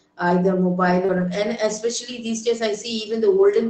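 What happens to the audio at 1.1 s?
Around 1.05 to 1.10 s there is short concealed packet loss: about 40 ms never arrived and the decoder extended the preceding sound to cover it, heard as a brief smear rather than a silent gap. Overlapping this, from 1.08 to 1.22 s, a lost packet was rebuilt from error correction. About 80 ms, which fits four 20 ms packets, was replayed from low-bitrate backup copies, so it sounds rougher and noisier but keeps the real content instead of an invented continuation.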